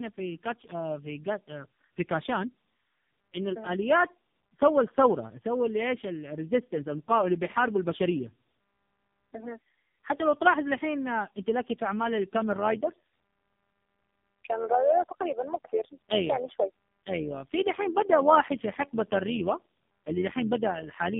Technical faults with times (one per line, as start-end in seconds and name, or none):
0.00-21.19 tandem speech coding
12.52-21.19 overlap-add ripple